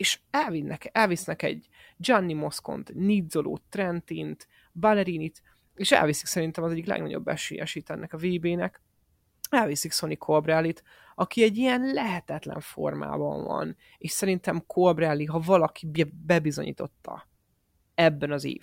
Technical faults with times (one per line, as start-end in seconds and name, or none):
7.75 block of digital silence
15.96 block of digital silence